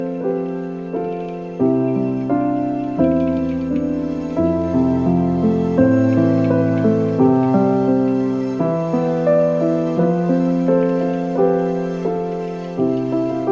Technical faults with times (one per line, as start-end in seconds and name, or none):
none